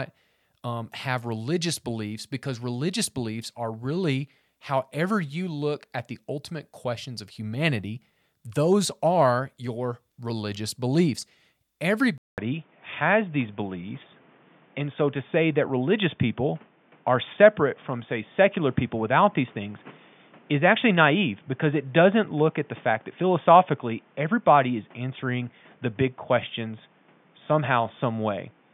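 An input switched to a poorer device at about 12.18 s is the likely cause of the change heard in this speech clip, after a gap of about 200 ms. From there to the end, nothing is present above 3.6 kHz, so the voice turns dull and boxy. The level shifts by roughly 5 dB, and a new background noise appears, sitting roughly 35 dB under the speech, because the replacement microphone or headset path has its own tone and noise floor.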